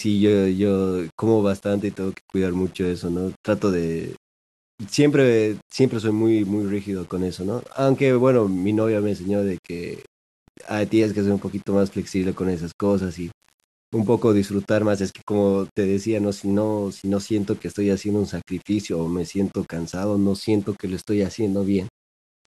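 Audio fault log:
throughout, low bit depth without dither: the speech has a grainy, gritty edge that shifts with the sound, and quiet tails sputter or drop out. Error sits roughly 30 dB under the signal, likely from undithered rounding to something like 7 bits.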